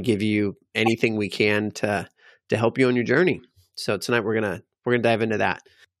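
A short speech recording carries a corrupt frame decoded between 0.86 and 0.91 s, after "give you" and before "we can to to": a loud glitch lasting about two codec frames, where damaged bits put energy at wrong frequencies. It is not a single-sample click.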